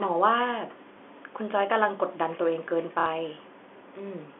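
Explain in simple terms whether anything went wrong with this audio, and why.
A brief blip at 0.93 s and a brief stutter at 3.00 s are packet loss with last packet repeated. Bits of audio went missing, so the same fragment replays for 30 ms and then 60 ms. That is a robotic hiccup rather than a silent gap.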